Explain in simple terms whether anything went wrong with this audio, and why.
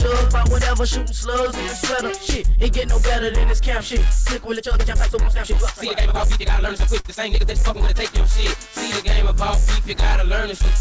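From 4.51 to 8.10 seconds the sound suddenly rushes ahead at nearly twice its normal pace (about 1.9 times) while the pitch stays the same, giving a hurried feel. This is a time-stretched section, likely from software squeezing the audio to fit a shorter length by dropping tiny pieces.

Inside that rushed stretch, from 7.00 to 7.07 seconds, the sound hangs for a split second, held about 48 milliseconds too long. This is a short stall from a late packet: a chunk arrived late, so the receiver stretched the last bit until it came, and nothing was lost.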